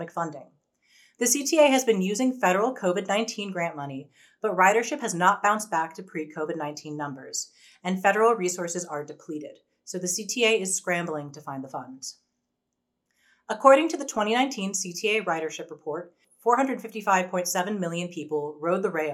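No technical faults are audible.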